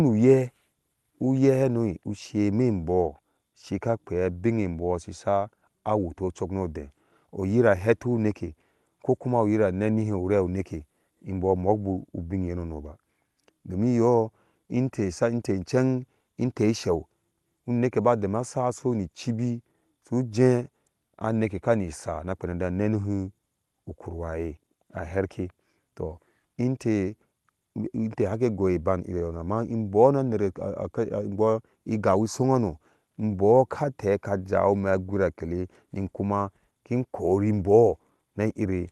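No technical faults are audible.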